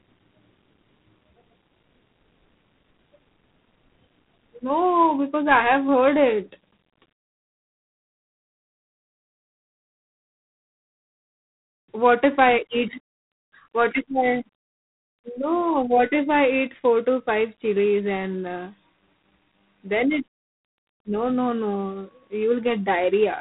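G.726 ADPCM runs throughout: a harsh, rasping hiss tracks the speech level and nothing passes above 3.9 kHz, which fits coarse 24 kbit/s difference coding.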